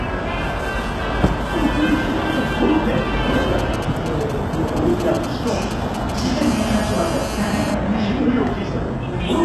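Throughout, the treble has a gritty, metallic quality, with nothing above 12.3 kHz and plainly audible codec damage. This is likely HE-AAC compression at a low bitrate, consistent with roughly 16 kbps: the upper band is rebuilt by copying lower bands upward, so its harmonics misalign.

From 3.59 to 6.20 s, GSM signalling bursts appear: a galloping pattern of brief 217 Hz buzzes, roughly 10 dB below the signal. A nearby 2G phone is exchanging short groups of radio bursts, which the audio circuitry rectifies into sound.

From 6.41 to 7.73 s, a GSM phone buzz follows: a hard, raspy, steady 217 Hz tone rich in harmonics, about 11 dB below the signal. Here the phone is in a call, transmitting continuously at 217 bursts per second, and the rectified pulses become this buzz.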